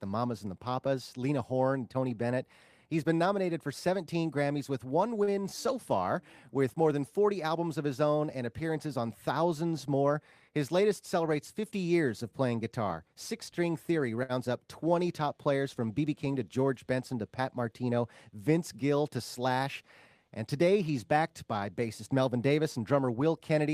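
At 5.23 to 5.30 s, and again at 14.23 to 14.32 s, a short stall from a late packet stretches the last sound by 39 ms, then 61 ms, while waiting. Nothing is lost, but the spectrogram shows frozen horizontal bands and the waveform a repeated cycle. From 10.09 to 10.50 s, a jitter buffer speed-up trims pitch-period slices, about 70 ms in all. The audio runs at 113% speed at unchanged pitch, with unchanged waveform periodicity and tightened spectral events.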